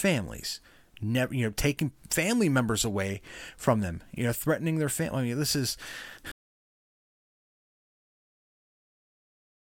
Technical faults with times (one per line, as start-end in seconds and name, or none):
6.31-9.79 audio dropout to silence